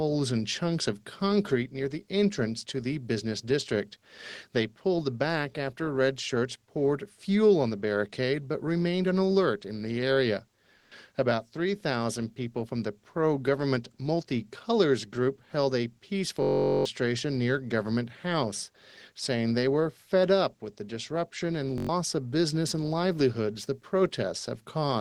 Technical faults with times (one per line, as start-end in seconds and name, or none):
10.77-10.91 comfort noise in place of the background
16.43-16.85 system hang loop
21.78-21.89 system hang loop